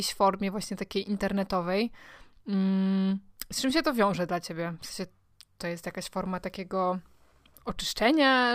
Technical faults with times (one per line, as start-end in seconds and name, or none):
none